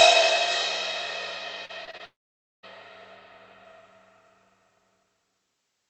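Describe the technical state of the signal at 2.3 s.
At 2.3 s the signal is inside a gap running from 2.05 to 2.65 s. The last sound smears into a fading buzz, then about 0.52 s of silence. This is likely a long network dropout. No packets arrived, so the receiver concealed about 0.58 s, and about 0.58 s of audio never returns.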